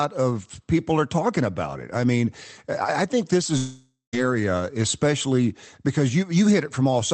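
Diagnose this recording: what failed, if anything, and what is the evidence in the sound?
The network stage failed: a long network dropout, likely a run of lost packets on the call path, left the receiver with no audio from 3.57 s to 4.15 s, just after "mean I think this". The jitter buffer's concealment stretched the last sound into a fading buzz for most of that gap, with the final 0.14 s or so near silent, and the sound resumes having lost about 0.56 s. The Opus call codec's 8 kHz band limit applies throughout.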